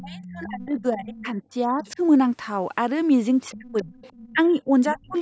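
From 0.0 to 1.99 s the speech dips in and out, by about 25 dB at its deepest. This is speech suppressed in double talk. Both sides likely spoke at once, and the echo canceller turned everything down. Inside that span, the other side's voice leaks through faintly, at 0.09 to 0.8 s, then 1.17 to 1.25 s and 1.82 to 1.9 s. It sits about 20 to 25 dB below the speech. The loudspeaker echo was likely not fully removed. More leakage comes at 3.51 to 4.31 s. The speech drops again at 3.56 to 3.93 s, by about 30 dB. A deeper cut, about 35 dB, follows from 4.31 to 5.16 s. A last, louder scrap of the far voice, about 15 dB down, comes through at 4.88 to 5.17 s.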